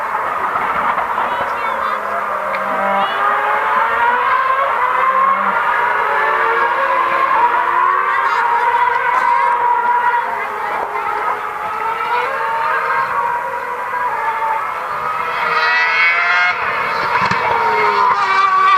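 Sudden forward jumps occur at 0.33, 4.77, 7.41, 9.61, 12.25, 13.29, 15.41 and 17.03 s. These are compressed frames skipped: whole blocks of coded audio never reach playback, so the sound lurches ahead by roughly 70 ms to a third of a second each time, in steps that fit 20 ms frames.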